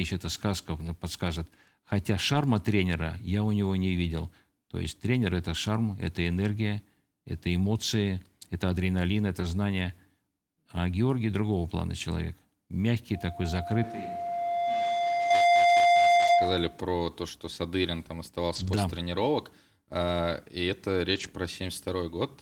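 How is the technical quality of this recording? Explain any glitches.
The recording has three kinds of fault: repeated lost packets rebuilt from error correction, a loudspeaker feedback squeal, and a brief switch to a distant microphone.

Lost packets rebuilt from error correction occur at 2.33–2.35, 9.39–9.45, 16.17–16.31, 18.55–18.77 and 21.11–21.25 s. The decoder filled each loss with a low-bitrate copy, so there is no gap, but those 20 to 120 ms stretches sound rougher and noisier.

The loudspeaker feedback squeal runs from 13.14 to 16.80 s. Loop gain exceeded one at 696 Hz, and that tone swells over roughly 1.5 s to about 10 dB above the speech.

From 13.84 to 15.30 s the sound abruptly turns roomy and thin, drops about 5 dB, and carries room noise about 25 dB below the speech. This is likely a switch to a distant microphone.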